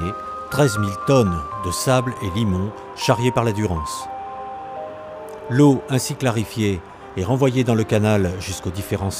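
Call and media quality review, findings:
No audible faults found; no action needed.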